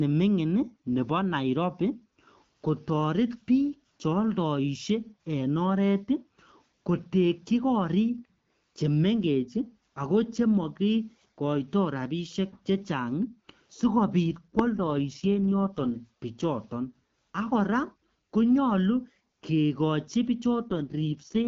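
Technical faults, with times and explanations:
14.26 to 15.92 s and 20.68 s to the end, AMR rate drop: the network ordered the AMR-WB codec down to a lower mode, consistent with a step from 12.65 to 6.6 kbit/s, spending the freed bits on protecting a weak radio link. Speech keeps the same bandwidth and never cuts out, but turns rough and raspy, just before "bichoton akora konyolu kekochi" and again after it, regaining the clearer HD Voice quality after the first drop once the rate climbs back.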